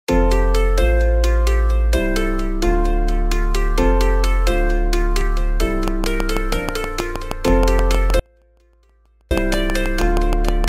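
From 5.88 s to 10.65 s a train of clicks runs over the sound: around thirty near-identical pulses at a steady 6.3 per second, peaking roughly 10 dB above the signal. Their even spacing and matching shape set them apart from the random, varied ticks of vinyl crackle. Something is repeatedly injecting a pulse, likely interference from nearby equipment or a faulty connection or power supply, and the ticking continues even where the sound itself falls away.

That fall comes at 8.20 s, when an audio dropout to a faint residue begins. For 1.11 s, until 9.31 s, the wanted signal is lost while the path stays live, leaving only a trace roughly 40 dB below its normal level, with the clicks still audible over it. The abrupt cut and equally abrupt return, with no taper at either edge, distinguish this from a natural pause or a fade. The likely cause is a momentary break in the signal feed ahead of a still-running input.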